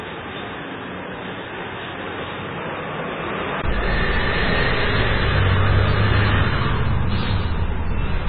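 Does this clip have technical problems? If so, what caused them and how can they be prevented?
Yes. Throughout, the sound is watery and swirly, with smeared attacks and nothing above 4.8 kHz. This is MP3 compression, likely at a very low bitrate around 16 kbps. The encoder removes the treble at a fixed point and lets weak frequency lines flicker on and off between frames. Unlike a device change, this damage never steps or shifts during the clip. Prevent it by encoding at a much higher bitrate or with a lossless format.

From the start to 3.64 s, the sound is duller and boxier, with nothing above 3.8 kHz. It is also about 5 dB quieter and carries a faint noise floor roughly 35 dB below it. At 3.64 s, a 20 ms gap falls and the band opens up. This likely comes from an input switched to a poorer device. The abrupt change, with its silence and shift in noise, separates it from the steady codec loss. 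Prevent it by locking the recording input so the system cannot swap devices mid-take.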